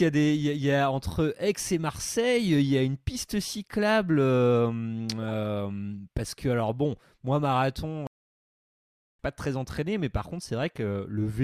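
Speech, with two problems. At 5.22 to 5.30 s there's a corrupt frame decoded: a short burst of squeaky noise, a few damaged frames played with garbled spectral data. Then from 8.07 to 9.19 s there's a playback stall, where the audio cuts out for about 1.1 s before carrying on, likely because the player ran dry of data.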